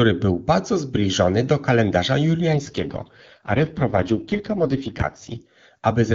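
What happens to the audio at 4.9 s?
At 4.9 s you're inside an AMR rate drop running from 2.54 to 5.42 s, just after "bardzo zbliżony do kalendarza". The link forced the codec down, trading speech bits for error protection, so the speech turns rough and synthetic, which fits the 6.6 kbit/s mode.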